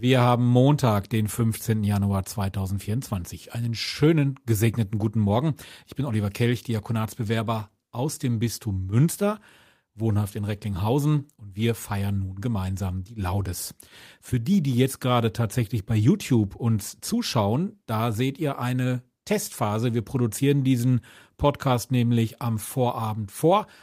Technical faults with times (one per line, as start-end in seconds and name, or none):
16.89-16.93 short concealed packet loss